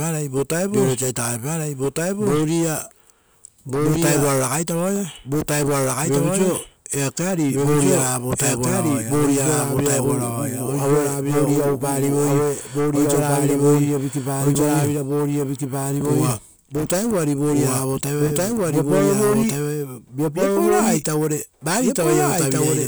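From the start to the end of the speech, a doubled audio track runs underneath: a second, full-band copy trails the original by about one and a half seconds at roughly the same loudness, with no decay or room colour, so phrases overlap their own echo. The likely cause is a second capture through a slower path or an edit holding two copies out of step. On a spectrogram, every harmonic pattern repeats intact, shifted right by that fixed gap.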